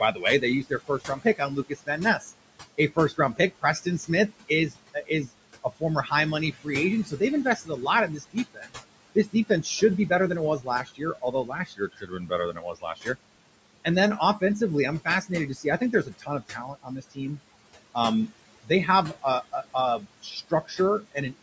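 Throughout, there are noise suppressor artifacts. The room noise gets pushed down about 21 dB in the gaps, then swells back under the speech.

The suppressor also mistakes parts of the speech for noise, so there's speech cut by the noise suppressor in four stretches. From 0.12 to 13.16 s it dips by up to about 21 dB, about four seconds in total. From 13.84 to 14.42 s it's a brief dip of about 14 dB. From 15.05 to 17.4 s it's roughly a second, dipping about 20 dB. From 17.94 to 21.33 s it dips about 18 dB. Soft consonants and word endings come out swallowed or faint.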